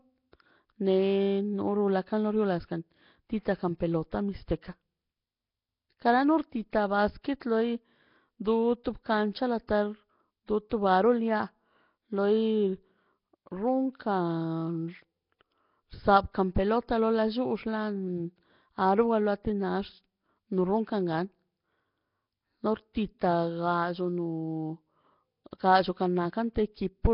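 Throughout, the speech has a rough, hissy halo and a smeared, underwater blur, with nothing above 5.3 kHz. This is likely heavy Nellymoser compression at around 22 kbps. Starved bands are filled with noise, giving hiss rather than MP3-style metallic swirling.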